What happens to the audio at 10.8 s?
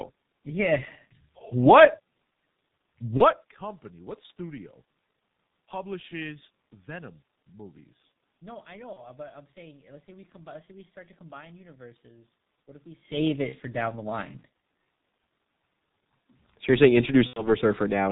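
At 10.8 s you're hearing the same G.723.1 codec damage that runs through the whole clip: nothing above 4 kHz and a slow-updating voice model over 30 ms frames. The speech sounds muffled and hoarse, with smeared consonants, which fits a heavily squeezed stream of about 6 kbit/s.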